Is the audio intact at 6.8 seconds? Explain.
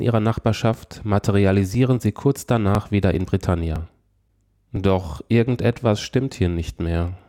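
No, there's an overlapping chunks glitch at about 6.78 s. The next 1.0 s chunk starts early, so about 6.5 ms replays, giving a quick click.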